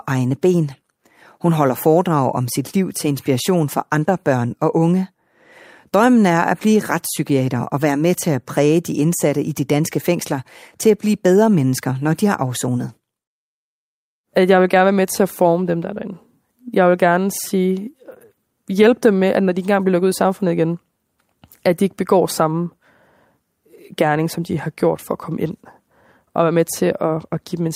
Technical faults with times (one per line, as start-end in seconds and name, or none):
none